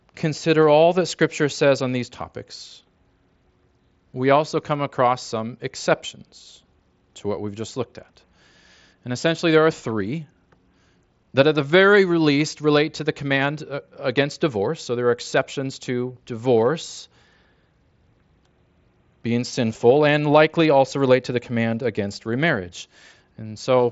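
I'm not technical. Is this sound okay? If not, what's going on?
Yes, nothing here sounds wrong.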